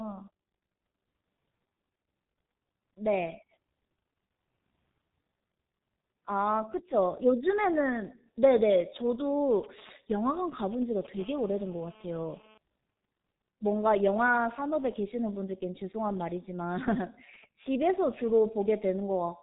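Throughout the speech, heavy G.723.1 codec damage is present. Nothing passes above 3.8 kHz, so the audio is muffled, and the slowly updated 30 ms frame model leaves a hoarse, smeared texture with blurred consonants, which fits a 6.3 kbit/s rate.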